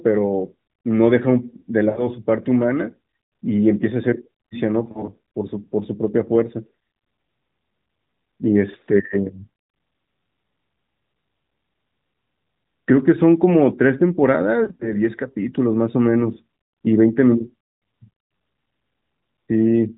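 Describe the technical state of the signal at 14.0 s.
At 14.0 s the audio is intact, with no fault present at that moment.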